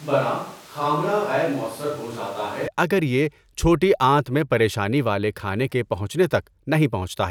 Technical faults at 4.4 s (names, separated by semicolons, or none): none